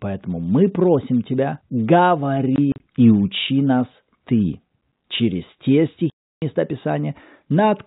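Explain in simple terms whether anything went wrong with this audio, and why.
Packet loss filled with silence happens twice. From 2.56 to 2.8 s, just before "и учи нас", several short holes add up to 80 ms, the longest 40 ms. Then from 6.1 to 6.42 s, right after "через те", a solid 320 ms gap. Chunks of the stream never arrived, and the receiver played silence instead, so speech cuts out abruptly with hard edges. The hole sizes fit 20 ms packets. The narrow telephone-band sound itself comes through cleanly.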